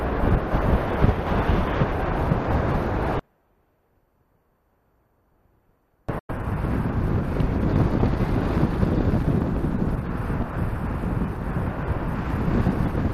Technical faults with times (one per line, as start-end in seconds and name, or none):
3.19-6.09 audio dropout to a faint residue
6.19-6.30 digital broadcast dropout